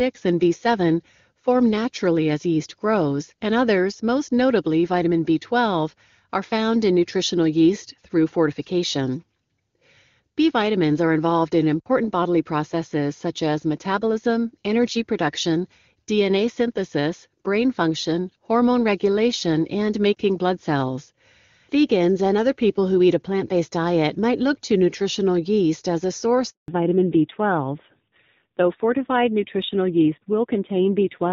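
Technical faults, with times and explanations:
26.50 to 26.68 s, handover gap: right after "nutritional yeast as a", the speech fades within a few tens of milliseconds and stays silent for 180 ms while the call switches networks. No speech frames arrive during the switch, so anything said in that stretch is lost.
26.68 to 31.33 s, fallback to narrowband: after the handover the call drops from HD Voice, sounding like AMR-WB at 23.85 kbit/s, to a narrowband codec, likely AMR-NB at 7.4 kbit/s. Nothing above 4 kHz remains, so the speech turns duller and rougher until the end.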